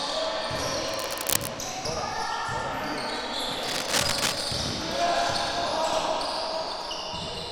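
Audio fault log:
0.88–1.49 s and 3.63–4.49 s: cable scratch noise. Dense, uneven crackling bursts sit over the sound at roughly its own level, likely from a worn cable or connector whose contact resistance flickered as it moved. On a spectrogram they show as ragged broadband smears, and on the waveform as jagged spikes.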